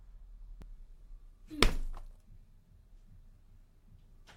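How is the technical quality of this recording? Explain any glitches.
One glitch stands out. At 0.62 to 0.65 s the sound skips forward as roughly 26 ms of audio goes missing and the waveform jumps. This is an overlap between stream segments: two segments claimed the same stretch of time, and the player discarded the overlap even though that audio was never duplicated.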